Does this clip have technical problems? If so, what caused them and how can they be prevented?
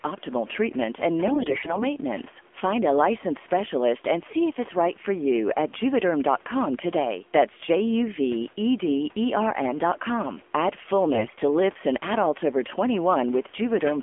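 Yes. The whole clip has the AMR narrowband mobile codec's buzzy, synthetic texture, with nothing above 3.4 kHz, which fits a low rate around 7.4 kbps. Sending wideband or at a higher rate would avoid this.

There are AMR bit errors from 1.28 to 1.91 s and again from 11.14 to 11.42 s. The speech turns hoarse and gargly because flipped bits scramble the codec's excitation pulses and fine parameters. A stronger link or better error protection would prevent them.

The faint room noise, about 26 dB below the speech, is just part of the recording.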